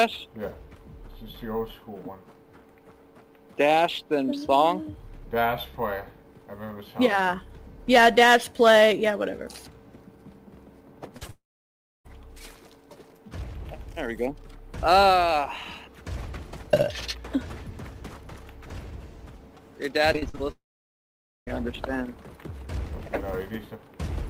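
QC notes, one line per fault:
11.17–11.23 s and 11.27–11.31 s, short concealed packet loss: two brief smears where about 40 ms and then 20 ms of audio failed to arrive and were patched by extending the preceding sound. Each is a momentary wobble, isolated rather than a sustained choppy stretch.
11.31–12.07 s and 20.52–21.49 s, long network dropout: the sound continues briefly as a fading buzz or hiss, then goes silent for about 0.64 s and 0.87 s respectively. Audio resumes with roughly 0.74 s and 0.96 s missing, likely because no packets reached the receiver. Unlike a short patch, there is a true gap.
20.13–20.42 s, repeated packet loss (robotic sound): five gaps in under 0.3 s, the longest 40 ms, leave about 45% of the stretch made of patched sound. This gives a choppy texture with fragments missing, rather than one clean smear.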